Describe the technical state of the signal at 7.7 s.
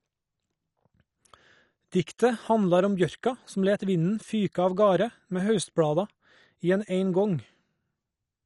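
At 7.7 s the speech carries the same damage heard throughout the clip, most likely MP2 compression. Nothing reaches above 11.3 kHz, and the remaining sub-bands are coarsely quantised, giving a dull, gurgling graininess that fits a low rate near 48 kbps. A plain low-pass filter would dull the sound without that flickering, granular texture.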